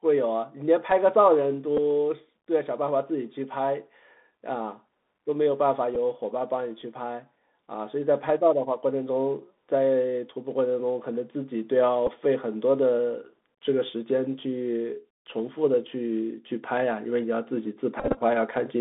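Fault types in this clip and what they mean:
Bluetooth CVSD headset codec: one-bit delta coding confines the sound to about 200 Hz to 3.7 kHz, adding granular hiss and scratchy s sounds, unlike plain band-limiting.
Bluetooth headset packet repeated: lost packets are replaced by replayed ones, giving small ticks at 1.77, 5.95 and 12.07 s, then a brief 267 Hz buzz around 18.0 to 18.21 s, not silent gaps.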